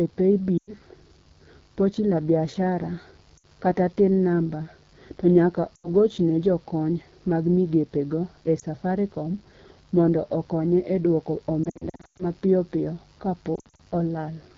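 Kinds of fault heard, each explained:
Mains buzz: There's a steady, raspy 50 Hz buzz sitting about 30 dB under the speech the whole way through. Sharp switching spikes on the supply spray harmonics well up into the kilohertz range, which gives it that gritty edge.
AMR wideband (HD Voice) codec: The whole clip went through AMR-WB at 8.85 kbit/s, one of its lowest rates. The pitch-pulse vocal tract model struggles there, so the speech comes out plainly rough and raspy, with a noise-filled top end above 6.4 kHz.
Lost AMR speech frames: Radio errors killed frames, so the decoder stretched the last good sound while fading it out. There are short dips at 0.58, 3.37, 5.75 and 8.6 s, and choppier scattered dropouts around 11.64 to 12.24 s and 13.56 to 13.82 s.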